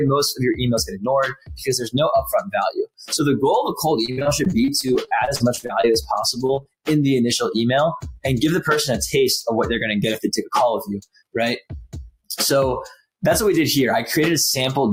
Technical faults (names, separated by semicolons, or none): sound cut by the noise suppressor; repeated packet loss (robotic sound); short concealed packet loss